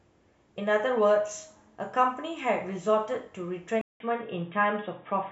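At 3.81 s the speech drops out for about 188 ms, then returns dull and boxy until the end, with nothing above 3.8 kHz, its level shifted by roughly 5 dB, and a faint new noise floor around 50 dB below it. This is likely an input switched to a poorer device mid-recording. A spectrogram shows a brief blank gap, then a flat ceiling at 3.8 kHz; the waveform shows the gap and a step in amplitude.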